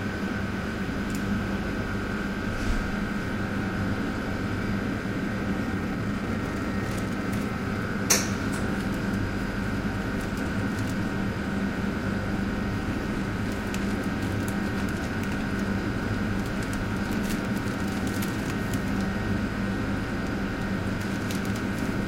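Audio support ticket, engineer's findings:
5.67–7.16 s: sound abruptly hurried, events crowding together, pitch unchanged, running at 140% speed. Jitter buffer speed-up in the receiver: buffer held more than its target, likely after delayed packets landed at once. Short pitch-period slices were cut repeatedly to drain it, dropping around 0.7 s of audio.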